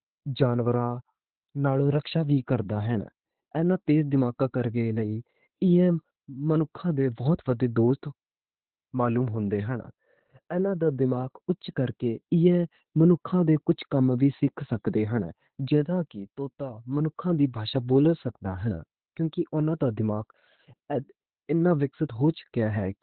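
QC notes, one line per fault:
Throughout, Opus voice compression. The band stops dead at about 4.3 kHz, so the speech is narrowband and muffled. The linear-prediction coder is rebuilding the voice from a filter and a coarsely coded excitation. That leaves a hoarse, buzzy, slightly robotic edge on the voice. The damage is heavy and never lets up. The narrow band and rough texture fit a very low bitrate, around 8 kbps.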